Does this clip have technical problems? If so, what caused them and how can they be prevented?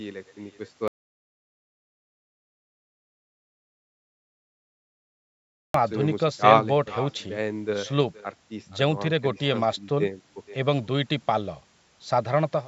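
Yes. On the far end of the call, the speech was played through a loudspeaker, picked up again by that microphone, and sent back with no echo canceller to remove it. This is an echo with no canceller. The speech is trailed throughout by a quieter copy about 19 dB down, arriving roughly half a second later, thinner than the original. To prevent it, the far end should use headphones or enable acoustic echo cancellation.

From 0.88 s to 5.74 s the input signal was lost, most likely through a disconnected device, a failed link or an accidental mute, while the recording carried on writing silence. The result is an audio dropout to silence. The sound cuts off abruptly and about 4.87 s of it is gone. That gap is silent with no room tone, and the audio then resumes mid-flow. To prevent it, secure the connections, check mute states, and monitor input levels while recording.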